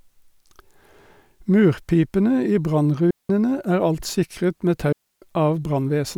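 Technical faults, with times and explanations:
3.11–3.30 s and 4.92–5.22 s, right after "alt sikret med": digital wireless dropouts. The speech drops into clean near-silence for about 190 ms and then 300 ms as the receiver mutes a corrupted link with a very short fade. Unlike an analogue radio dropout, no hiss or static burst surrounds either gap.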